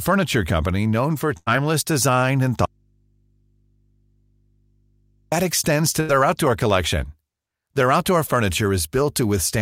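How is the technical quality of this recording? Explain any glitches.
The recording has three glitches: two short bursts of packet loss and one long dropout.

A burst of packet loss at 1.37–1.48 s and again at 6.00–6.11 s: the receiver extended the last sound for roughly 90 ms and 80 ms while fading it, then resumed with about 80 ms of speech missing each time.

An audio dropout to a faint residue runs from 2.65 to 5.32 s, about 2.7 s, likely from a signal break upstream while the input stayed live, leaving only mains hum far below the speech level before speech cuts back in.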